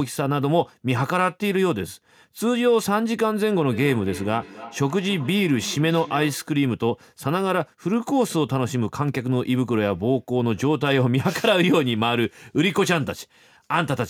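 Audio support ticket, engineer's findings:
Feedback echo between two devices. Second device in the room on the same call, replaying the far microphone's signal into this mic. Local echo canceller cannot remove audio it did not play. Symptom: speech returns as repeats at a steady interval of roughly a third of a second, 3.72 to 6.56 s, peaking about 16 dB below the direct speech.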